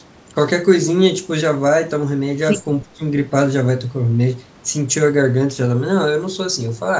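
Speech suppressed in double talk, from 2.85 to 3.01 s: the speech dips sharply, by roughly 20 dB, for about 150 ms. The likely cause is an echo canceller failing to separate this side's speech from the far side's loudspeaker echo during simultaneous talk and turning the speech down.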